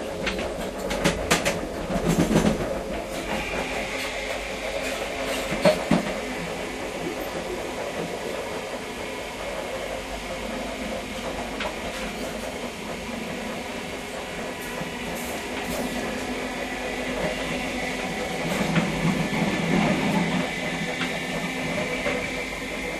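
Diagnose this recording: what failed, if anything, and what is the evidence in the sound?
Chunks out of order at the driver or buffer stage. At 13.72–13.80 s, a 40 ms chunk plays one chunk late. The result is a brief jumbled moment with three hard joins.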